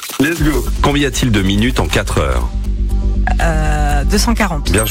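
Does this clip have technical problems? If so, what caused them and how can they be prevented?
Yes: GSM signalling bursts from a nearby 2G phone, rectified by the audio circuit, add galloping ticks and 217 Hz buzzes, fairly quiet, from 0.52 to 2.66 s. Keep phones away or switched to airplane mode.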